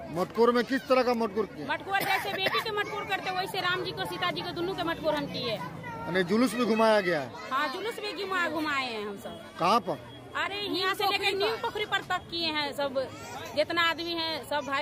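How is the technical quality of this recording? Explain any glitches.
The technical quality of the recording is sound, with no glitches to explain.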